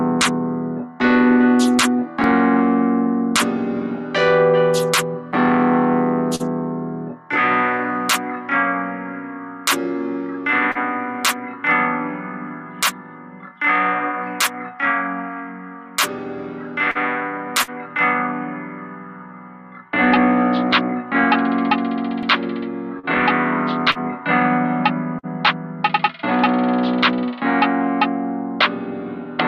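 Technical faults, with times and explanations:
6.35–6.42, 10.71–10.78, 16.91–16.98, 17.63–17.70, 22.99–23.06, 23.91–23.98 and 25.19–25.26 s: short concealed packet loss. Each time about 40 ms of audio arrived too late to decode, and the receiver invented a 35 to 45 ms stand-in by extending the preceding sound before cross-fading back, heard as a brief smear or wobble. On a spectrogram, harmonics run unnaturally flat or blur into noise for that sliver. The waveform shows a smoothly repeated or decaying stretch.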